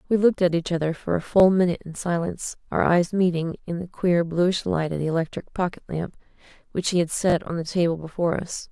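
At 1.40 to 1.42 s the speech has a repeated buffer: one 20 ms segment plays twice, then at 7.30 to 7.34 s one plays three times. Delayed audio forced the replays, each hard join giving a brief stuttering buzz, with nothing apparently skipped.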